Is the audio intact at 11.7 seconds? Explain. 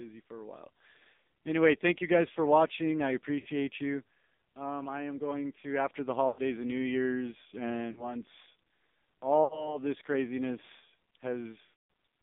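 No. From 11.64 to 11.74 s, a burst of lost AMR speech frames hits the audio: radio errors made frames fail their checksum, so the decoder kept repeating its last good pitch and vocal tract settings while turning the gain down. Across this span the sound smears into a stretched, warbling continuation that sinks toward silence rather than stopping cleanly. When decoding resumes, the sound returns briefly thin or rough.

Underneath, the AMR narrowband mobile codec is also running here, as it does throughout. The phone path confines the signal to roughly 200 Hz to 3.7 kHz, so nothing above that reaches the ear and the sound is muffled. The heavy coding damage is audible as a buzzy, synthetic quality, which fits a low AMR-NB mode around 5.9 kbps. At that rate, the vocal tract model is driven by very few pulses per subframe.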